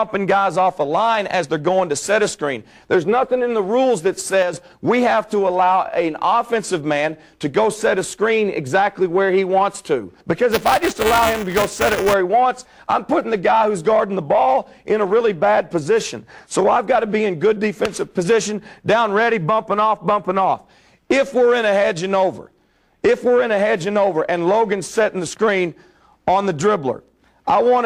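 At 4.43 s the whole level steps down by about 6 dB, sound and background noise together, and stays there until it steps back up at 4.53 s. That's a sudden gain jump: the change lands between one sample and the next with no ramp, so the level shift is abrupt rather than a fade. The likely cause is a gain setting or bit shift being applied instantly.

From 10.52 to 12.14 s there's buffer tearing, heard as a robotic buzz at 375 Hz riding on the sound, which fits a 128-sample buffer. The writer and the reader of the ring buffer have drifted so they cross inside every period. A small slice of each buffer holds audio from one lap back, a few milliseconds stale, with hard joins on both sides. The buzz is present only while there's signal.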